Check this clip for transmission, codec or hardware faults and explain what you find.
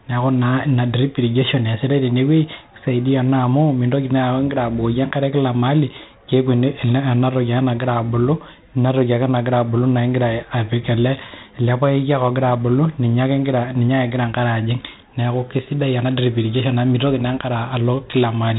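One codec fault runs through the whole clip. Throughout, the speech carries a gritty hiss riding every loud syllable, with rough attacks and nothing above 3.8 kHz. This is heavy 4-bit ADPCM compression, whose coarse adaptive steps leave level-tracking noise, consistent with roughly 32 kbps.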